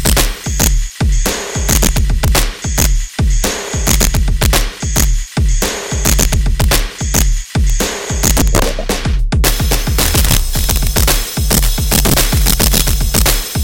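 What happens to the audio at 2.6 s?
Integer overflow affects 2.6 s, as it does the whole clip: peaks driven about 5 dB past the integer limit wrap to the opposite sign, giving cracks sharper than clipping.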